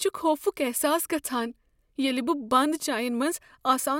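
No technical faults can be heard anywhere in the speech. There is no moment in the recording that calls for a time mark.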